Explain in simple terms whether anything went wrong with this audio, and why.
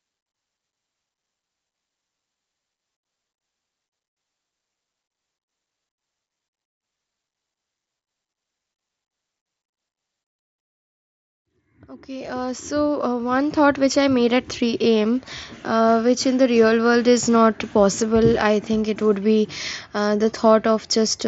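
Nothing went wrong with this audio, since the speech simply comes through a Bluetooth headset link working as it should.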